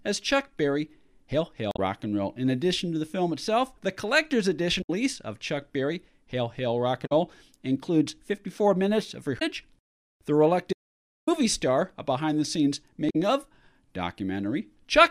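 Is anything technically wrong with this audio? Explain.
Yes, the speech has two kinds of fault.

Damaged data in a compressed stream occurs at 1.71–1.79 s, 4.81–4.90 s (just after "film itself the collector's"), 7.03–7.12 s, 9.35–9.42 s (after "minutes of") and 13.06–13.16 s. Each time, corrupt frames make the decoder lose sync and hunt for the next header. This produces a brief chirp or squawk that shows on a spectrogram as a smeared broadband smudge.

An audio dropout to silence runs from 10.73 to 11.27 s, about 0.54 s, just before "star a behind the". It was likely caused by a lost input, with silence written over the gap. The waveform shows a flat line and the spectrogram a dark band.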